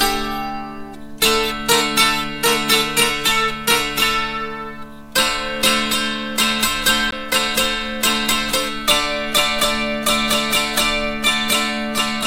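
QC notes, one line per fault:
7.11 s, CD skip: the laser lost its track and landed on a different turn of the disc's spiral, so playback cuts out for roughly 15 ms, leaving a short tick, then resumes from another point, producing an abrupt discontinuity in the audio.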